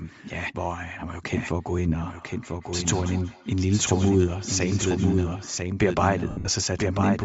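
From start to end, a second copy of the speech runs about a second behind the first. It sits roughly 5 dB quieter. The copy is full-band and dry, with no decay or room colour. This is a doubled audio track. The likely cause is the same signal being captured twice, once through a slower path. Alternatively, an edit may hold two copies out of step.

Across the whole clip the speech also has a breathy, grainy edge. Much of the upper spectrum sounds thinned and replaced by noise. This is Bluetooth LC3 compression, and the damage is plainly audible. LC3 is the transform codec of Bluetooth LE Audio. At low rates it discards upper-band detail and fills the gaps with noise. The sound points to 10 ms frames at around 32 kbps, which is likely the cause of the grain.

From 2.07 to 5.62 s each stretch of speech comes round again at roughly 200 ms intervals. The repeats grow thinner and more ringing. 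At their loudest they sit about 20 dB below the speech. This is feedback echo between two devices. One device plays what the other's microphone sent. That microphone picks it up again. Neither echo canceller removes sound played by the other device, so the loop keeps cycling.

From 6.30 to 6.48 s the speech breaks into a noisy smear. Gaps totalling 150 ms are scattered across 180 ms. The longest run is about 70 ms. These are lost LE Audio frames. The sound fits about 15 lost frames. For each missing frame, the LC3 decoder reuses the last spectrum with random signs. That turns tonal sound into hiss. The longer run fades toward silence as concealment gives up.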